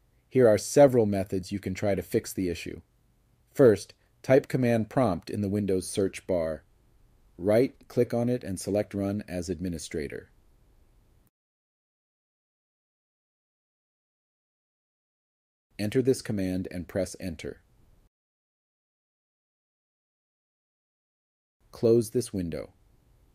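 Nothing stood out as a technical problem on listening to this audio.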